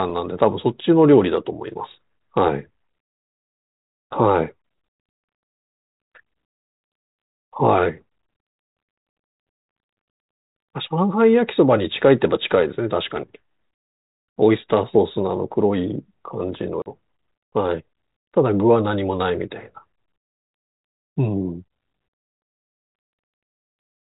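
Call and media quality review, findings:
Packet loss on an ADPCM call, 16.82 to 16.86 s: a hard-edged 40 ms dropout filled with silence, about two packets' worth. The likely culprit is the receiving decoder. Its adaptive predictor and step size lose track of the sender's while the packets are missing, so the speech resumes slightly distorted until they catch up again. This is on the G.726 leg at 32 kbit/s, the usual DECT rate, which carries only light coding hiss of its own.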